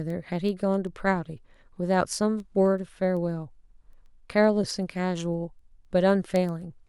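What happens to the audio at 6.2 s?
At 6.2 s the speech is inside a run of word clock ticks lasting from 0.10 to 6.87 s. The receiver's clock drifts roughly 200 ppm from the sender's, so a sample is slipped about every 0.15 s, heard as sharp, steady ticks of uneven strength.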